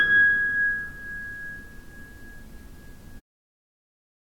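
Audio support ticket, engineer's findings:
No fault found in this clip of sounds. Smooth fade-out at the end, beginning around 3 s and complete by 3.21 s, with no click or hard edge.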